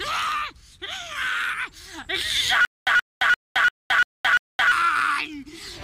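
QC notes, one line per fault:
2.65–4.72 s, stutter with silent gaps: a 126 ms fragment of sound repeats six times at an even period of about 344 ms, each repeat followed by 219 ms of digital silence. The pattern sounds like a stalled player or stream that likely replays its last buffered fragment on each retry, then runs dry before the next attempt. Whatever audio belonged in this span never plays and is lost from the output.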